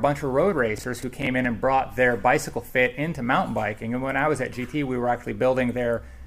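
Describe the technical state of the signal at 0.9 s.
At 0.9 s you're inside a burst of processor overload crackle, 0.78 to 1.45 s: a handful of missed buffers of around 10 ms replay stale audio with hard edges, giving gritty tearing.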